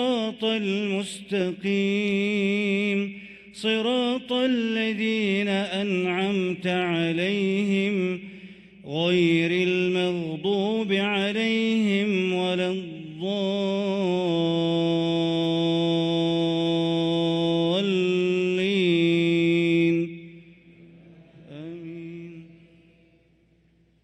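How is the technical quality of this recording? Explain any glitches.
No glitches or technical faults are audible anywhere in the recording.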